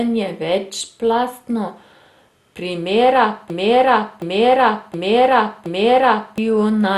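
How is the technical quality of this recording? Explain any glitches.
Technical quality is poor: the speech carries codec damage throughout, and its second half is taken over by a repeating loop.

MP2 compression: The audio was likely squeezed through MPEG Layer II at a low rate; the damage fits something near 64 kbps. Starved of bits, the encoder shuts off its upper sub-bands, so nothing survives above 12.1 kHz, and the remaining bands are quantised coarsely. The result is dull, muffled speech with a plainly audible gurgling, granular roughness as bands drop in and out.

Broken-record loop: From 3.5 s to 6.38 s, the playback or encoding chain likely stalled and kept resending the last fragment in its buffer. A chunk of about 0.72 s plays four times in a row, each repeat identical and butted directly against the last. Whatever speech belonged in those nearly three seconds never arrives, so the sentence stops advancing and stutters mechanically instead.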